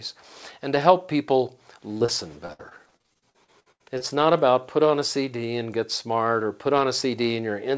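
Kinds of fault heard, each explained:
Short concealed packet loss: two 20 ms holes just after "and to help people", each patched by stretching the previous sound, heard as quick little smears.
Repeated packet loss (robotic sound): from 2.46 to 4.02 s packets keep dropping, up to 79 ms at once, so patched gaps pile up into choppy, robotic audio before "not about put on".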